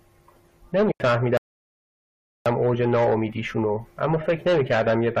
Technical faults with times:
0.92-1.00 digital wireless dropout
1.37-2.46 rebuffering stall

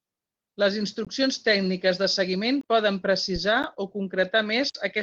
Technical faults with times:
1.05 block of digital silence
2.61-2.63 block of digital silence
3.63 block of digital silence

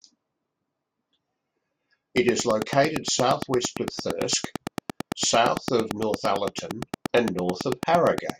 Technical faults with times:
2.17-8.31 train of clicks

